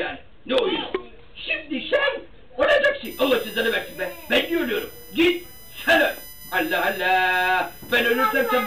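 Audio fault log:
3.05–8.66 s, USB whine: a steady tone sets in at the 1 kHz frame rate, around 20 dB below the signal, strongest at its 13 kHz harmonic, as bus current leaks through power or ground. On a spectrogram, flat horizontal lines spaced 1 kHz apart run to the end.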